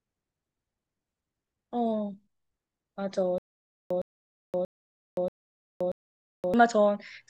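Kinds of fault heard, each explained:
Stutter with silent gaps, 3.38 to 6.54 s: a short fragment of speech about 112 ms long plays, then about 522 ms of dead digital silence follows, and the pair repeats five times at a steady period of about 633 ms. This is likely a stalled player or stream that replays its last buffered fragment on each retry, then runs empty, so the speech that belonged in those gaps never arrives.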